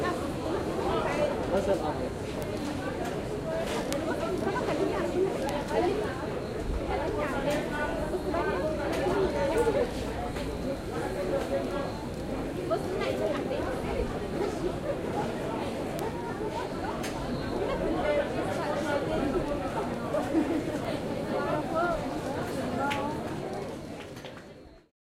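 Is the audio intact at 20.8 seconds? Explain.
No: at 20.85 s a single flipped bit corrupts one sample, a bit error spike that jumps to about -25 dBFS and returns, heard as one sharp broadband tick.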